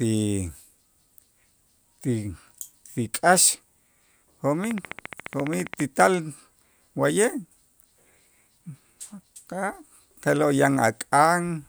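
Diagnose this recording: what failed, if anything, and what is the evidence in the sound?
A train of clicks runs from 4.64 to 5.81 s: about twenty near-identical pulses at a regular 14.7 per second, standing roughly 10 dB above the speech. The steady repetition likely comes from electrical interference coupling into the analogue wiring or a faulty connection or power supply.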